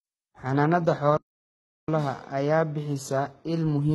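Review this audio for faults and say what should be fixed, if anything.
The speech has gritty, lispy sibilants and metallic treble with nothing above 11.8 kHz, likely from heavy HE-AAC compression at what sounds like roughly 16 kbps. Encode at a higher bitrate or with plain AAC to avoid replicated treble.

A playback stall silences the speech from 1.17 s to 1.88 s, about 0.71 s, and it then resumes, likely because the player ran out of data. Enlarge the playback buffer and keep the decoding thread unblocked.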